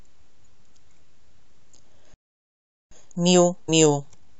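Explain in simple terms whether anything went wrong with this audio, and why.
Yes, three things go wrong in this speech.

At 2.14 s the audio suddenly falls silent and stays silent until 2.91 s, a gap of about 0.77 s. This is a playback stall. The most likely cause is that the player ran short of data or was briefly held up, so it had nothing to send out. Unlike a natural pause, the silence cuts in mid-flow and the speech then resumes.

From 2.91 s to 4.29 s the speech sounds rushed, running at 1.5 times normal speed, while the pitch stays the same. This is time-compressed catch-up: the player trims tiny slices out of the audio and blends the edges to make up the time lost in the stall. A tape or record running fast would raise the pitch, and here it doesn't.

At 3.68 s, inside that hurried stretch, roughly 70 ms of audio goes missing. These are compressed frames skipped: whole blocks of the stored audio were never played, so the sound jumps forward.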